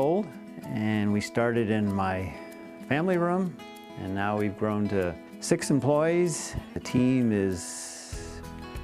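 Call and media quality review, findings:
No faults found in clip.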